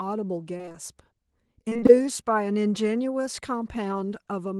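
Repeated packet loss strikes at 0.57–0.76 s and 1.69–2.04 s. Missing packets are patched by extending the preceding sound, concealing nearly half of each stretch, so the speech turns choppy and robotic.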